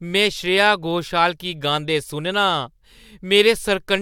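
No audible faults turn up anywhere in the speech recording.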